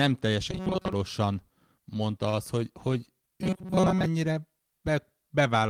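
From 0.51 to 0.93 s the speech takes on robotic sound from repeated short buffers: a rigid, metallic buzz at 188 Hz that still tracks the phrasing loosely. The likely cause is audio arriving too slowly, so the player keeps replaying its last fragment of about 5.3 ms. Most of the real audio is skipped and replaced this way. On a spectrogram this appears as evenly spaced horizontal harmonics at multiples of 188 Hz. The waveform shows near-identical cycles repeating.

At 2.29 to 2.36 s there is a short stall from a late packet. A packet missed its slot, the jitter buffer emptied, and the receiver held the last sound for 38 ms until the data came. Playback then resumed from the same point, so nothing is lost, but everything after it plays 38 ms later. It sounds like a slightly held sound. A spectrogram shows a brief frozen, smeared patch. The waveform shows a repeated or stretched stretch with no gap.

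From 3.42 to 4.06 s the same robotic buzz returns at 188 Hz. It looks identical in both views, with the harmonic stripes now lasting longer.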